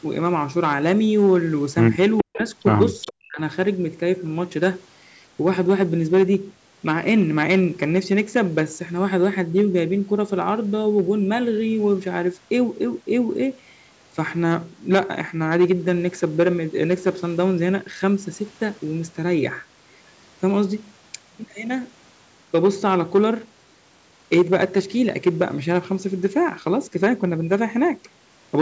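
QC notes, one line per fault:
Throughout, hard clipping: crackle on loud peaks, as the signal is driven about 8 dB past full scale and around one percent of samples are cut flat.
2.18–2.37 s and 3.01–3.13 s, echo leak: a delayed copy trails the speech by 421 ms, about 10 dB then 20 dB down, likely from an uncancelled loudspeaker echo.
2.23–2.43 s and 3.26–3.39 s, speech suppressed in double talk: the speech dips sharply, by up to about 40 dB, likely because the echo canceller ducked the talker during overlap.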